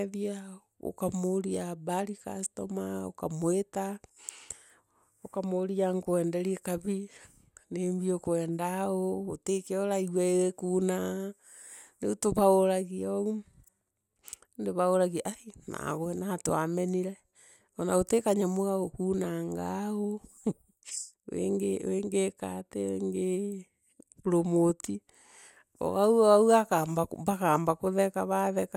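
No technical faults are audible.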